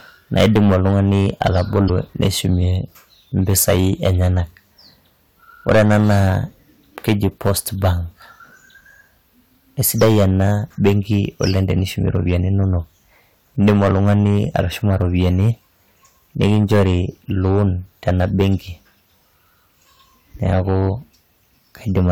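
Hard clipping runs throughout this speech: about 12 dB of overdrive flattens roughly 3% of samples, giving harsh fuzz on every loud syllable. It is unlike soft saturation's rounder, warmer distortion.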